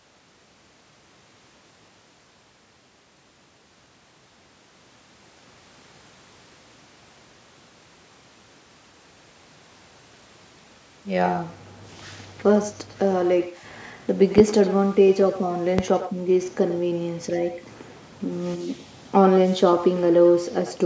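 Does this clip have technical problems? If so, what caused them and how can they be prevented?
Yes. The far end played the call over a loudspeaker and its microphone fed it straight back with no echo canceller, so this echo with no canceller shadows the talker's speech with a thinner copy roughly a tenth of a second later, about 14 dB down. Using headsets or enabling acoustic echo cancellation at the far end prevents it.

Two loud pops sit on top of the speech, at 14.38 to 14.42 s and 15.79 to 15.82 s, each a single sharp jolt far louder than the speech, which continues underneath. A voltage step from a connector, switch, static discharge or driver glitch is the likely cause. Secure cables, avoiding switching or unplugging during calls, and keeping audio drivers updated prevent it.

The call microphone processing, which stops at 8 kHz, is not a fault.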